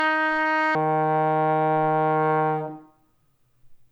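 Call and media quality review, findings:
Section at the wrong speed, 0.0 to 0.75 s: opening sound hurried and shrill, pitch raised about ten semitones, then snaps to normal. Playback at 2.0x speed; likely a resampling or clock mismatch in the player or editing stage.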